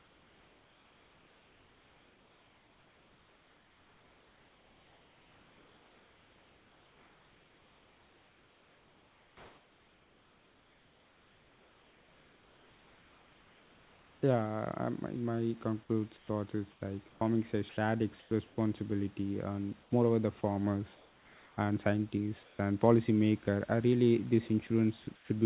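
Speech, carried over a call line with nothing above 4 kHz, which fits a G.711 codec. From 0 to 14.22 s, comfort noise in place of the background gives a steady, featureless hiss about 3 dB quieter. This is likely from discontinuous transmission. Shorter patches occur at 19.83–19.91 s, before "moreover the farmers and", and at 22.43–22.59 s, before "and policymaker are really". From 14.25 to 14.49 s, a jitter buffer slow-down repeats tiny slices of audio, adding 42 ms. Speech plays at 86% speed at the same pitch. At 16.17–18.57 s, sound chopped by the voice detector drops 0.64 s of speech edges, which is likely from the detector toggling. The same happens at 24.67–25.29 s, after "and policymaker are really", losing 0.2 s.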